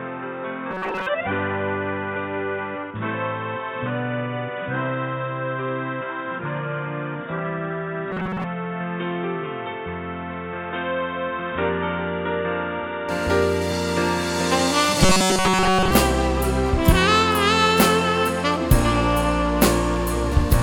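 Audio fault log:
0.00–13.09 s, input switched to a poorer device: the sound is boxy and dull, narrower in band, about 5 dB quieter, and carrying a noise floor roughly 30 dB down. It opens up abruptly at 13.09 s with no gap, likely a return from a lesser input. On a spectrogram, the narrow band widens there, and the waveform steps up.
0.71–1.07 s, 8.12–8.44 s, 15.03–15.91 s, robotic sound from repeated short buffers: the sound turns into a rigid metallic buzz at 188 Hz. The likely cause is a roughly 5.3 ms block being replayed in place of most of the real audio in the first two runs and all of it in the last. A spectrogram shows evenly spaced 188 Hz harmonic lines, and the waveform shows identical repeating cycles.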